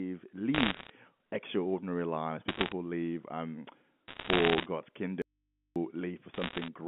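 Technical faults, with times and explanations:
0.54–0.90 s, 2.48–2.72 s, 4.08–4.66 s, 6.34–6.68 s: bit errors on a digital phone line. Flipped bits in the 64 kbps A-law stream corrupt single samples, giving bursts of sharp ticks and crackle; the first ends just before "extraordinary lives", the second runs between "extraordinary lives" and "live um", and the third begins just after "live um".
5.22–5.76 s: audio dropout to a faint residue. The signal likely vanished upstream while the line stayed open, so for about 540 ms only mains hum remains, roughly 50 dB down, with abrupt edges.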